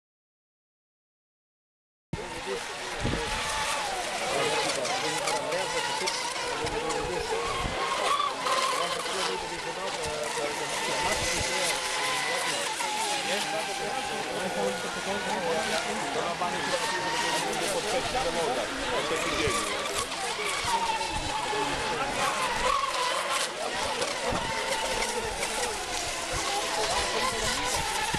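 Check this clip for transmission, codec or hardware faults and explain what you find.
One fault is present: an audio dropout to silence. It is already under way when the clip begins and lasts until 2.13 s. That stretch is silence, with no room tone. The input was likely lost, so only silence was written. The sound then starts abruptly.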